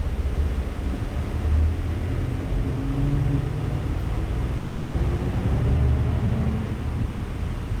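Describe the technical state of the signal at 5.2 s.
At 5.17 to 5.20 s the sound lurches forward: roughly 150 ms is missing, and the two sides are butted together with only about 10 ms of fill. This is a skip ahead, where a stretch of audio was dropped, in transit or by an overflowing jitter buffer, while later audio was already queued.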